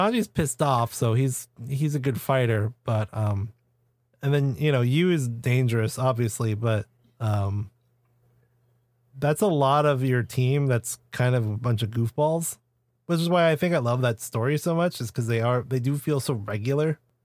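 Nothing technical stands out anywhere in this stretch of speech, so there's no fault to point to or explain.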